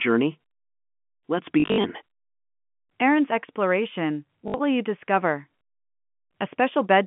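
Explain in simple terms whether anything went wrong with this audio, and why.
Packet loss with last packet repeated occurs twice: between 1.6 and 1.84 s, and again from 4.48 to 4.54 s, just before "will you discover". Pieces of sound failed to arrive, and the receiver played the last piece again until new ones came. Repeats don't fit the sound's natural rhythm, so the sound briefly stutters robotically. About 160 ms went missing in the first burst, with gaps up to 60 ms, and 60 ms in the second. This sits on top of a telephone-quality line, which sounds muffled.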